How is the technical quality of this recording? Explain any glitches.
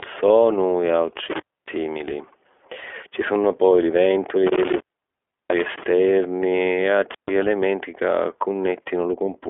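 The technical quality is poor. Codec damage runs through the whole speech clip, and three dropouts break it.

iLBC codec: The speech is narrowband, 300 to 3400 Hz, with nothing above 3.6 kHz. Each 20 ms frame is coded alone, at what sounds like the 15.2 kbps mode. The result is plainly rough and synthetic.

Intermittent contact: A loose connection opens briefly three times. After "sonu e", the sound cuts from 1.31 to 1.76 s, with the line open about 0.28 s. After "sunnu poi li", it cuts from 4.47 to 5.84 s, open about 0.70 s. A final cut runs from 7.11 to 7.32 s, open about 0.14 s. Crackle marks each edge, and faint hiss fills the gaps.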